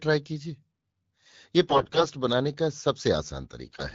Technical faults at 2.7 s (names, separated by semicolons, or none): block size mismatch (padded)